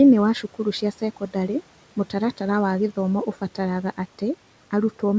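Speech, carried over a call path whose audio stops at 8 kHz. Between 0.82 and 1.49 s there is speech cut by the noise suppressor. Parts of the speech drop by up to about 11 dB, in total roughly 150 ms. Those sounds come out faint and swallowed. The suppressor mistook quiet speech for noise and turned it down. The room noise sits about 20 dB below the speech.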